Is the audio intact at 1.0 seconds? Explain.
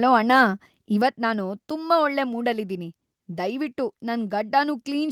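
No. At 1.02 s the speech and background drop abruptly by about 5 dB, likely the microphone volume stepped down by call software lowering input gain in one step.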